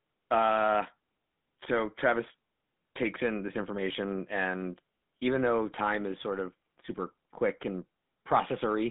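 Throughout this speech clip the GSM full-rate codec is plainly audible. Nothing reaches past roughly 3.6 kHz and little below 150 Hz. The pulse-driven vocal-tract model, sparsely sampling its excitation, leaves a buzzy, gravelly roughness on the voice, consistent with a 13 kbps mobile link.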